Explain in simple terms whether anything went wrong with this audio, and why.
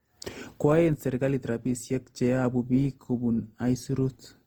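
Something did go wrong here, and it runs through the whole clip rather than showing up at one moment. The speech has a swirly, hollow quality, and the starts of sounds come out soft and smeared. That's generation loss: the audio was most likely squeezed by a lossy codec, unpacked, and squeezed again, around five times over. Each round throws away a bit more and adds its own fuzz, so the damage piles up.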